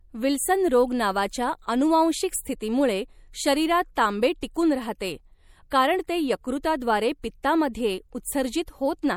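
Throughout the speech, MP3 compression damage is plainly audible. Nothing is present above 20.7 kHz. The texture is watery and swirly. Weak frequency lines seem to drop in and out between frames, and sibilants pick up a metallic chirp. This is likely an MP3 encode at about 64 kbps. At that rate the encoder cannot fund every band, so quiet detail gets zeroed.

Pre-echo appears four times. The first is at 4.41 s, just after "अनुवांशिक स्थितीमुळे शरीरात तांबे". The second runs from 4.99 to 5.01 s, after "स्थितीमुळे शरीरात तांबे टिकून". The third is at 5.70 s, just before "कारण ते". The last runs from 7.22 to 7.24 s. Each is a brief hiss of 13 to 20 ms ahead of a sharp onset. The codec smeared noise sized for the loud attack back across the quiet start of its block. The attacks sound soft as a result.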